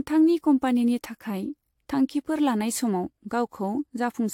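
Repeated lossy encoding, likely an AAC-style codec run about seven times over at moderate bitrates, causes generation loss across the whole speech clip. Each pass requantises the signal on a shifted frame grid, so the errors stack rather than cancel. The result sounds swirly and hollow, with smeared consonant attacks and a watery texture worse than a single encode at that bitrate would give, and nothing remains above about 19.3 kHz.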